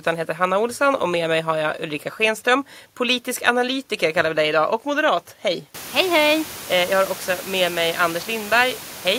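No technical faults can be heard in this speech clip. The room noise around the microphone rises by about 24 dB at around five and a half seconds and then sits about 18 dB below the speech, which is part of the recording itself.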